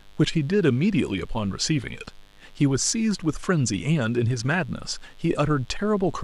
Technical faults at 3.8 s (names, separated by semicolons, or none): mains buzz